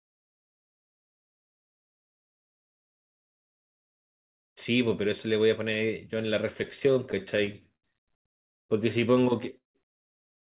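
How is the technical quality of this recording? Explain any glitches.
The recording has two network-related glitches in the later part of the speech, heard through narrowband call audio with nothing above 4 kHz, which fits a G.711-type telephone codec.

From 6.64 to 7.85 s there are repeated stalls (stutter). The jitter buffer kept running dry, so the receiver stretched the last sound fifteen times, the longest gap 77 ms. The speech drags and judders. A spectrogram shows smeared, repeated frames, and a waveform shows small stretched segments.

From 9.57 to 9.77 s there is a call audio freeze. The speech halts for about 170 ms, mostly silence, then resumes where it stopped. Packets likely arrived late, emptying the buffer. A waveform shows a flat gap, and a spectrogram shows a blank vertical strip.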